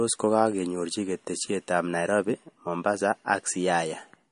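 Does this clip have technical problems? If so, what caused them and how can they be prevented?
Yes. Throughout the speech, nothing sounds above 10.6 kHz, and the s sounds turn watery and swirly. This is clearly audible MP3 compression, likely at a starved bitrate of around 40 kbps. With so few bits, the encoder discards the treble and drops weak frequency lines from frame to frame. A spectrogram shows a flat ceiling at 10.6 kHz with flickering gaps beneath it. To prevent this, encode at 128 kbps or higher, or keep a lossless copy.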